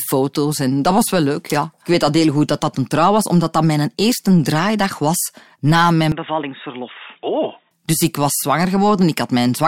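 After "draaidag was na mijn", 6.12 to 7.71 s turns dull and quieter, cut off above 3.8 kHz, likely input switched to a poorer device.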